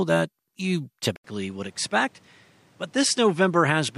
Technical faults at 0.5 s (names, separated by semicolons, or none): none